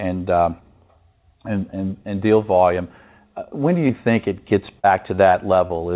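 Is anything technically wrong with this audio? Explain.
Yes, two packet-loss problems. At 3.88–3.91 s, short concealed packet loss: about 20 ms of speech never arrived, so the decoder extended the preceding sound, leaving a brief smear or wobble. From 4.79 to 5.72 s, repeated packet loss (robotic sound): four separate gaps, the longest 45 ms, were each patched by continuing the previous audio, making that stretch choppy. Throughout, the band-limited call sound, with nothing above 4 kHz, fits a G.711-style telephone codec.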